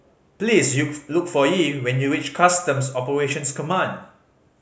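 Nothing stood out on listening to this speech recording.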